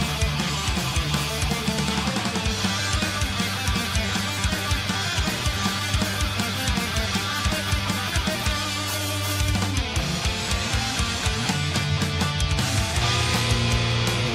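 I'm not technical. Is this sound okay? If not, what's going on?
Yes, this sound is okay. Nothing is going wrong in it that you need to worry about.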